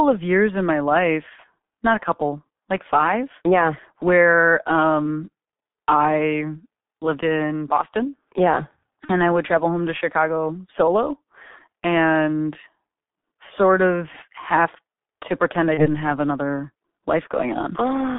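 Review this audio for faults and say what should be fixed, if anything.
The whole clip is heavily degraded by the G.723.1 codec at 6.3 kbit/s. Its 30 ms frames and a 150 Hz to 3.6 kHz band leave speech muffled and hoarse with smeared consonants. Use a wideband codec such as G.722 or Opus, or send the audio at a higher bitrate.

VoIP packet loss concealed by the speech codec occurs at 9.05 to 9.12 s, just before "I would travel home", and at 15.74 to 15.88 s, between "have to pretend I" and "have another". Each gap fits a single lost 30 ms frame. The decoder stretched its last pitch and filter into a fading tone or noise, then recovered gradually. Add jitter buffering and forward error correction, or carry the audio over a more reliable network path.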